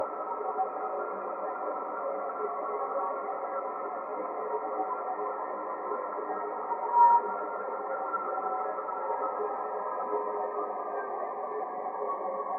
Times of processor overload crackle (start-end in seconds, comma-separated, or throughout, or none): none